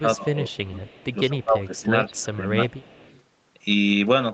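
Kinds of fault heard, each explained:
Speech suppressed in double talk: from 0.0 to 0.83 s and again from 1.29 to 2.7 s the speech dips by as much as about 20 dB, with roughly half a second of the first stretch and about a second of the second affected. This is likely an echo canceller that could not tell its own talker from loudspeaker echo while both sides spoke, so it turned everything down. The speech fades.
Echo leak: from 0.68 to 1.14 s and from 2.72 to 3.23 s a faint delayed copy of the speech sits 191 ms behind the original, about 30 dB below it. The cause is likely a far end playing the call over a loudspeaker whose echo canceller left some of the microphone pickup in place and sent it back. The return is quiet and trails the speech by roughly a fifth of a second.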